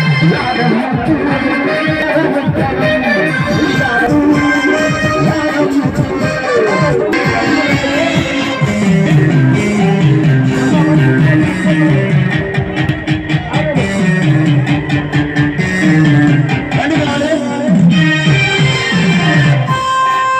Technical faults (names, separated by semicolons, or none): damaged data in a compressed stream